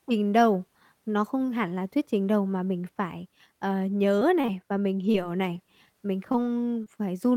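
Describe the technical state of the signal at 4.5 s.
Around 4.5 s the speech passes through two network faults. First, from 4.41 to 4.46 s, there is a short stall from a late packet. A packet arrived after it was due, and the jitter buffer ran dry. The receiver held the last sound for about 29 ms until the packet turned up, then carried on from the same point. Nothing is lost. The sound is drawn out briefly, with a faint buzz or dip, and the playback delay grows by 29 ms.

Straight after, from 4.46 to 4.50 s, comes a short concealed packet loss. About 20 ms of audio never reached the decoder in time. The receiver bridged the gap with roughly 21 ms of synthesised continuation, extending the pitch of voiced sound or shaping noise for unvoiced sound, before blending back into the real signal. It is heard as a brief smear or wobble right after the stretched sound. Any very short consonant there may be missing.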